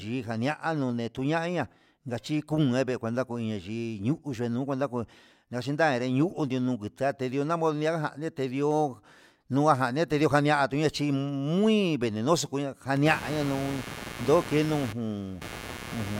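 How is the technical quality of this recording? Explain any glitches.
The recording has one clear glitch, near the end. From 12.96 s to the end, computer activity noise appears: changing processor or graphics load disturbs the ground shared with the audio circuit, injecting a buzzing, chirping texture pulsing around a hundred times a second. It sits roughly 10 dB below the speech and follows the computer's activity, not the speech.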